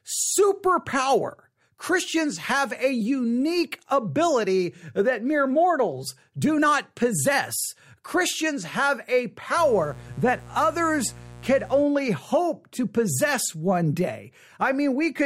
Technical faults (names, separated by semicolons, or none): mains buzz